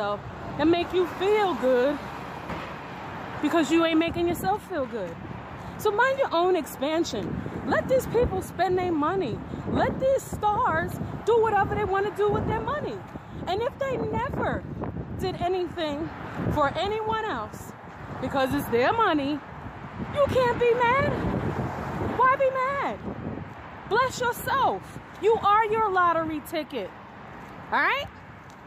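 There's a short glitch at about 16.23 s, which is damaged data in the compressed stream. Part of the data there is wrong, so the decoder can't make sense of the frame it's reading. It either spits out garbled output or drops it, loses its place in the stream, and scans ahead for the next valid frame header before it locks back on. The whole disturbance is very brief, under 20 ms, so it comes across as a quick blip in the audio.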